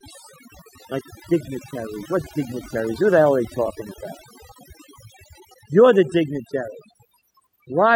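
Speech with overdone noise removal throughout: frequency bands near the noise estimate are gated off, leaving a lowered, twinkling background, with quiet parts of the voice removed along with it.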